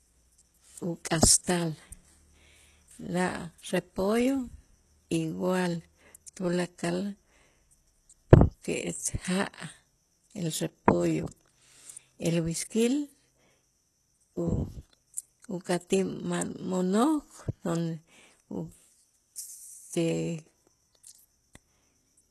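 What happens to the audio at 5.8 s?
At 5.8 s the speech carries the same damage heard across the whole clip, likely from HE-AAC compression at a bitrate that sounds like about 16 kbps. The lower spectrum is coded directly, and the treble is rebuilt by copying lower bands upward, so s sounds come out gritty and lispy. A spectrogram shows a hard ceiling at 12.3 kHz and repeated, blocky upper-band texture, while the waveform looks unremarkable.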